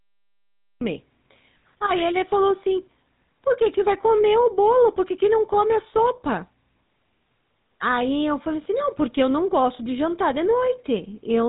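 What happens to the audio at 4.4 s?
At 4.4 s the speech carries GSM full-rate codec damage, present throughout. The vocal tract is modelled and driven by sparse pulses, so the voice sounds buzzy and gravelly. Nothing above 3.8 kHz survives.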